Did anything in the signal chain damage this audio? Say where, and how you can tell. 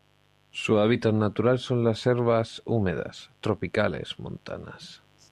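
Yes: mains buzz throughout the speech, a steady raspy 50 Hz buzz well below the speech, from analogue wiring where switching spikes inject harmonics twice every mains cycle.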